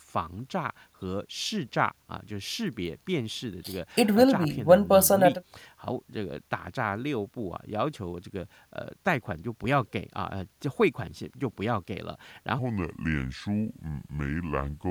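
A speech recording with a section at the wrong speed from 12.59 s to the end at 14.90 s. That stretch plays at 0.7 times normal speed. The voice drops about seven semitones and drags, likely from being resampled to the wrong clock.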